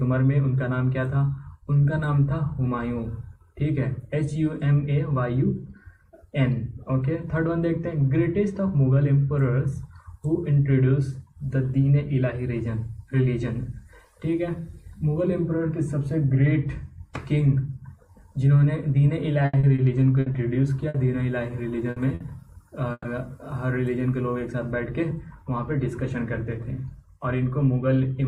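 Between 19.45 and 20.97 s the connection dropped or delayed packets repeatedly, six gaps with the longest at 80 ms, and the receiver bridged each by extending the preceding sound. About a fifth of that span is this patched material, 290 ms in all, and 180 ms of real audio is gone, giving the choppy, robotic quality of repeated packet loss. Two short bursts of packet loss follow at 21.90 and 22.14 s, each lasting about 90 ms. In each, roughly 60 ms of concealment continues the last sound and fades it out, and then about 60 ms of audio is skipped, so the sound jumps ahead slightly. At 22.92 to 23.14 s there is a call audio freeze. The delivery delay likely jumped by about 120 ms and drained the jitter buffer. The last sound is stretched for about 120 ms, including about 40 ms of near silence, and then the audio picks up where it stopped with almost nothing lost. From 24.35 to 26.58 s a jitter buffer speed-up trims short pitch-period slices to reduce the extra buffered delay, removing about a tenth of a second in total. 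The audio runs at about 104% speed with its pitch unchanged.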